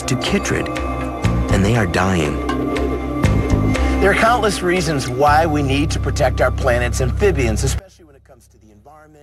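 From 7.79 s to the end at 9.22 s, the sound collapses by about 30 dB. It turns faint. Centred content and bass nearly vanish. The likely cause is one channel inverted, so the shared signal cancels when summed to mono.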